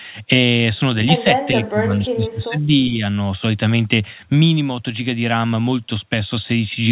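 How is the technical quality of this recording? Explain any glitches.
One clear glitch stands out: the speech is suppressed in double talk between 1.52 and 3.03 s. The likely cause is an echo canceller that could not separate the local talker from loudspeaker echo while both sides spoke, so it pulled the voice down along with the echo. For about 1.5 s the voice sinks, by roughly 25 dB at its lowest, before recovering. Across the clip the audio carries nothing above 4 kHz, which fits a narrowband G.711 mu-law call path.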